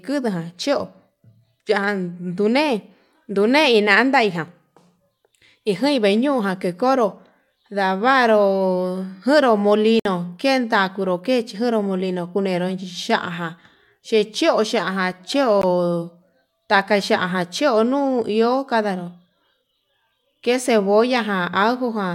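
At 9.99 s the speech drops to dead silence for about 58 ms, resuming at 10.06 s, and at 15.62 s a second, much shorter gap of about 17 ms clips it again. Both are Bluetooth stalls, likely caused by radio interference holding up packets until the headphones' playback buffer emptied. The output then falls silent until the resent data arrives, and the speech picks up after each hole.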